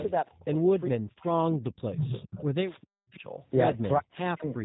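Throughout, the sound is slightly rough and synthetic, with nothing above 4 kHz: G.729 codec damage, from the 8 kbit/s VoIP codec rebuilding speech from a vocal tract model.

From 0.00 to 0.04 s comes a brief ghostly repeat, 410 ms behind. It is an echo leak, likely a loudspeaker echo the far end's canceller missed.

From 0.25 to 0.71 s the voice sinks by around 30 dB. This is speech suppressed in double talk, likely an echo canceller ducking both talkers at once.

The same suppression returns from 0.91 to 2.12 s, cutting deeper, around 40 dB. The echo leak reappears from 1.95 to 2.43 s, fairly strong and again 410 ms late.

Suppression hits once more from 2.59 to 3.26 s, with a faint echo from 3.13 to 3.20 s. A final dropout, from 3.98 to 4.59 s, dips around 40 dB.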